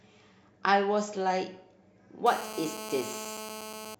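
From 2.26 to 3.95 s there's GSM phone buzz, a steady, raspy 217 Hz rattle about 11 dB under the speech, from a nearby phone's call bursts getting rectified.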